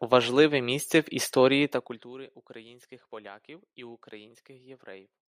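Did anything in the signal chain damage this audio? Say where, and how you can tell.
Yes. There's zipper noise from 1.61 to 2.13 s: the level drops by roughly 25 dB in 1 dB jumps, about 40 a second, each leaving a tiny tick. That's gain applied per buffer in the driver or processing stage with no smoothing between steps.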